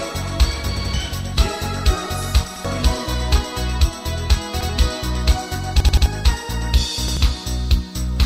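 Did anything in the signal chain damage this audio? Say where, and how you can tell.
Yes. Short stutters, each repeating the same slice of sound with hard joins, occur at 0.77, 2.56, 4.61, 5.80 and 7.08 s. This is a repeated buffer at the driver or buffer stage: playback starved and replayed its last 85 ms block, which fits a 4096-sample buffer.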